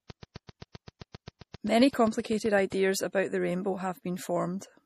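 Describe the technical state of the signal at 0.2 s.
At 0.2 s the speech sits inside a train of clicks running from 0.1 to 2.73 s: around twenty near-identical pulses at a regular 7.62 per second, peaking roughly 5 dB above the signal. They are heard as steady ticking, likely from electrical interference or a faulty connection injecting pulses.

Underneath, the whole clip shows low-bitrate audio saved at a high bitrate. Nothing exists above 14.8 kHz, and the remaining artefacts fit a 40 kbit/s MP3 likely re-encoded at high bitrate, which cannot restore what the first pass discarded.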